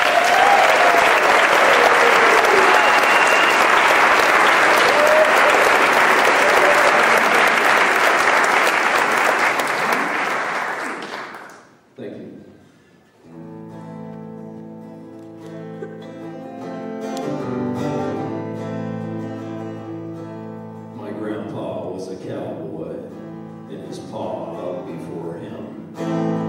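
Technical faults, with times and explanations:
Nothing stood out on listening to the audio.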